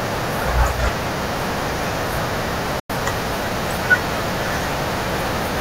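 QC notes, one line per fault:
2.80–2.90 s, digital broadcast dropout: the speech snaps out to silence for roughly a tenth of a second, then picks back up mid-flow. The fade into the gap is only about 3 ms, so it lands as an abrupt hole rather than a dip. That's the receiver muting when incoming frames went bad, and the roughly 96 ms of missing audio fits about three lost frames. Whatever was broadcast during that stretch just isn't there.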